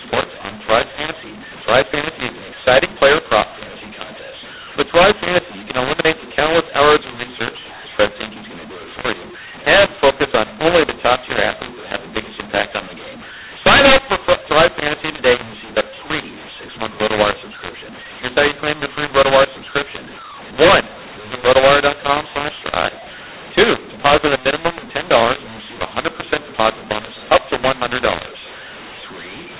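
From start to finish the speech has a mu-law and A-law mix-up: A-law telephone samples decoded as mu-law, scrambling levels into harsh distortion, with pauses lifted into noise.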